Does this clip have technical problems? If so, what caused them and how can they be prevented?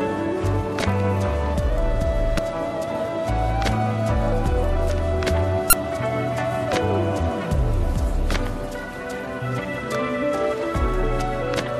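Yes. The clip has damaged data in a compressed stream, at 2.35 to 2.39 s and again at 5.70 to 5.73 s. In both spots, part of the encoded data was corrupted, so the decoder could not read those frames correctly, lost its place and had to hunt for the next valid frame header. Each event lasts roughly 34 ms and is heard as a short chirp, click or brief hole breaking into the sound. Storing and transmitting the file with checksums or error-checked transport, and verifying it before playback, would prevent this.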